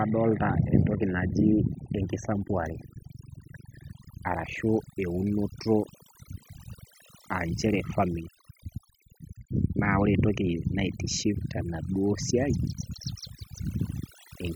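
From start to finish, the pauses between phrases in the speech drop to near silence with twinkling specks where the background noise should be. This is overdone noise removal: a noise reducer set far too aggressively has pulled individual frequency bands down or out whenever they came close to its noise estimate. The quieter parts of the voice were removed along with the noise.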